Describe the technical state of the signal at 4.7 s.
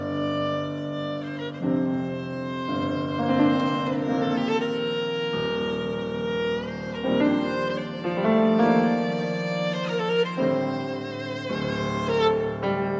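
The signal at 4.7 s is intact, with no dropout, clipping, distortion or other fault to be heard at that moment.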